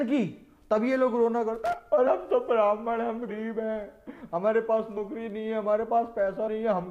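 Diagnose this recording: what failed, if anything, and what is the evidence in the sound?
Loose connector crackle, from 1.65 to 1.73 s, places the failure in the analogue wiring. A short, irregular burst of scratchy crackle cuts through the sound for about 70 ms. A worn or dirty contact is shifting and rapidly making and breaking, chopping the signal on and off. Any DC standing on the line turns each break into a small pop.

Compressed frames skipped, at 2.06, 3.28, 4.96 and 6.47 s, point to the codec or storage stage. At each point the sound lurches forward, losing roughly a tenth of a second at 2.06 and 4.96 s, somewhat more at 3.28 s, and a little less at 6.47 s. These losses fit a handful of whole frames that were missing or rejected by the decoder as damaged.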